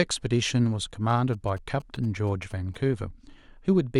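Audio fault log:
1.10–2.76 s, GSM signalling bursts: a galloping dit-dit-dit of short buzzes sits under the speech, roughly 25 dB below it. A nearby 2G handset in its signalling state is transmitting short groups of radio bursts. The audio circuitry rectifies that RF envelope, so each group is demodulated into a click train. The bursts repeat at 216.7 Hz, which gives the buzz its 217 Hz tone. The gaps between groups produce the uneven, galloping rhythm.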